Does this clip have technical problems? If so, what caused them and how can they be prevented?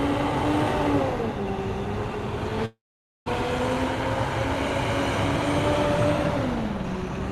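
Yes. From 2.65 s to 3.30 s there is a long network dropout, likely caused by a stall in the network link that stopped audio reaching the receiver. The receiver stretched the last sound into a fading buzz, which gives way to about 0.5 s of silence. When the sound resumes, roughly 0.4 s of material is simply gone, and playback lands about a fifth of a second later than before. A steadier connection, or a jitter buffer with more headroom for outages, would prevent this.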